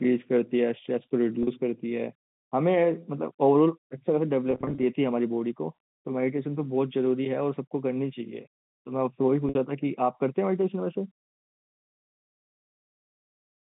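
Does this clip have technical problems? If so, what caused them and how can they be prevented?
Yes. Packet loss with pitch repetition occurs at 1.43 to 1.47 s, 4.51 to 4.83 s and 9.49 to 9.55 s. The receiver repeats the last pitch period to fill each gap, so the speech briefly holds with a buzzy tone. The middle stretch loses about 160 ms in short runs. A more reliable network path or forward error correction would prevent it.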